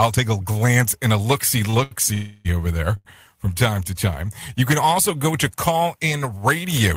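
Speech, with three related network-timing faults. From 1.65 to 2.06 s, right after "and a look see", there are repeated stalls (stutter): four times the jitter buffer ran dry and the receiver held on to the last sound, filling about 126 ms in total, roughly a third of that span, with the longest gap 81 ms. Nothing is lost, but the speech drags and catches. On a spectrogram these show as short runs of frozen, smeared harmonics, and the waveform shows repeated near-identical cycles. Then from 2.14 to 2.47 s, just before "over there from", comes a call audio freeze of 308 ms. The last sound is extended as a buzzy tail that fades but never reaches silence, and the speech then resumes exactly where it stopped, so the pause is inserted and no speech is missing. The likely cause is a sudden rise in network delay of about the same length. On a spectrogram it appears as horizontal streaks that gradually lose energy, and the waveform shows a decaying, regular envelope instead of speech. 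Finally, a short stall from a late packet at 2.97 to 3.07 s, right after "over there", stretches one sound by 80 ms while the receiver waited for the overdue packet, before carrying on from the same point. It is heard as a slightly held syllable with a slight buzz or dip and appears as a brief flat band on a spectrogram and a short repeated pattern in the waveform.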